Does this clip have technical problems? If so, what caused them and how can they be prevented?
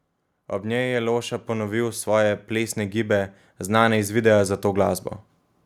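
Yes. Automatic gain rising: the gain control judged the input too quiet and lifted its gain by about 9 dB between 0.63 and 5.06 s, so speech and background swell together. Fixing the input level and disabling automatic gain prevents it.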